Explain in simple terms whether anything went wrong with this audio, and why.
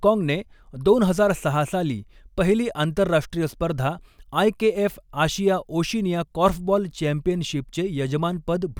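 Nothing went wrong here: the speech comes through steadily, with no dropouts, glitches or odd sounds anywhere to point to.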